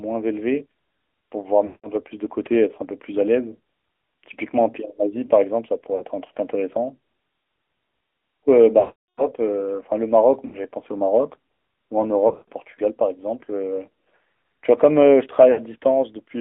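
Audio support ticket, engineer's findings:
AMR narrowband mobile codec, throughout: speech confined to roughly 250 Hz–3.5 kHz, plainly buzzy and synthetic. Pulse-excited vocal-tract model at a rate that fits AMR-NB 10.2 kbps.

Lost AMR speech frames at 1.66–1.93 s, 5.96–6.05 s, 8.80–9.33 s, 10.46–10.60 s, 12.28–12.50 s and 15.52–15.61 s: decoder repeats the last good pitch and spectral settings at falling gain. Short gaps warble. Longer ones stretch and fade out. The 8.80 s event fits roughly 19 frames.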